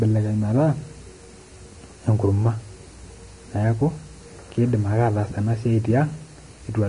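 Likely Vorbis compression at a low bitrate near 33 kbps coarsely quantises the treble throughout, leaving nothing above 10.6 kHz and making the speech audibly hissy, grainy and roughened.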